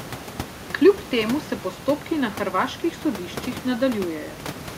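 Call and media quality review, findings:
No system faults found in the speech signal; the only non-speech content is the room's own background noise, sitting about 15 dB below the speech, which belongs to the recording environment rather than the transmission path.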